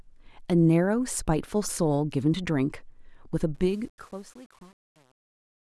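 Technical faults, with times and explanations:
3.55–5.64 s, truncation distortion on a fade: as the fade-out starting around 3.5 s sinks, too few bits remain, which fits an undithered 8-bit path. From 3.79 s the tail turns gritty. The waveform shows square stair-steps, and the spectrogram shows broadband speckle.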